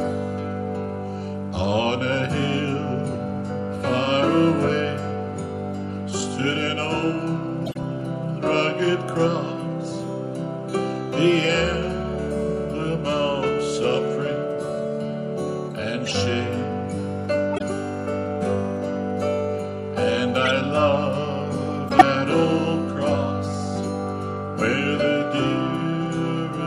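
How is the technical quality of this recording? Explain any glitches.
The recording has one recurring fault: corrupt frame decoded, at 7.66, 16.05, 17.52, 20.43 and 21.89 s. Damaged compressed frames were played as if valid, so misread gains spray energy into wrong frequencies, giving brief chirpy noise bursts around -15 dBFS, louder at 20.43 s and around 0 dBFS at 21.89 s.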